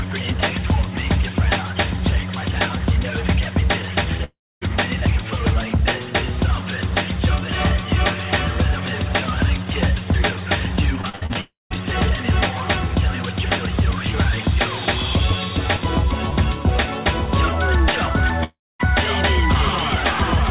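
Audio carried over a call path with nothing above 4 kHz, consistent with G.711 mu-law, has three long network dropouts, likely caused by packets failing to arrive, at 4.24 to 4.63 s, 11.41 to 11.82 s and 18.44 to 18.81 s. Each removes roughly a third of a second. The last sound smears into a fading buzz, then about 0.18 to 0.27 s of silence follows before the audio resumes with that part gone. On a waveform these appear as tapering tails dropping into flat gaps. Just before the second dropout, from 11.01 to 11.37 s, repeated packet loss (robotic sound) cuts six short holes, the longest 61 ms, with about half the stretch patched over. The result is choppy audio with pieces missing that a spectrogram shows as smeared, repeated vertical slices with broken harmonics.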